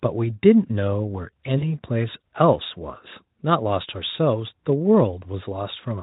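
At 1.57 s the stream drops about 40 ms of audio, which fits two 20 ms frames, and the Speex decoder covers the hole with VoIP packet loss concealment. It extends the last pitch and spectral shape while lowering the gain, so the speech smears into a buzzy tone or coloured noise that fades. Each concealed frame feeds the next, so the voice stays weak or distorted until about 1.73 s. Speex coding damage is faint at most.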